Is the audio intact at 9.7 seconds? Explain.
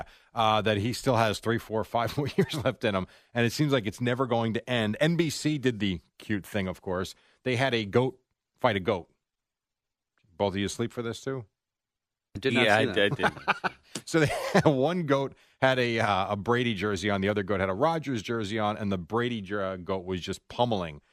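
Yes, the speech at 9.7 seconds is intact, with no fault to be heard at that moment.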